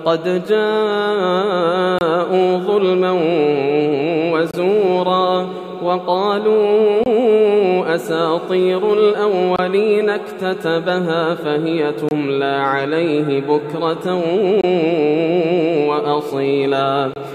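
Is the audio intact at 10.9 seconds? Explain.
Yes, the audio is intact at 10.9 seconds, with no dropout, click, distortion or other fault audible at that moment.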